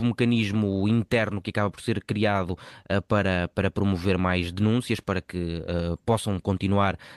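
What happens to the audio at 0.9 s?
Nothing goes wrong at 0.9 s: the speech carries on intact through that moment, with only the ordinary character of the call path's Opus coding and no dropout, glitch or other fault.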